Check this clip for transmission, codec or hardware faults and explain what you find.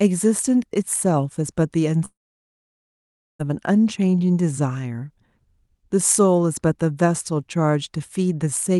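The clip has one transmission fault, a long network dropout from 2.05 to 3.41 s. The speech stops being delivered for about 1.34 s, likely because packets stopped arriving. The receiver briefly extends the last sound as a fading buzz or hiss. Silence fills the remaining 1.26 s. The speech then resumes with that stretch missing.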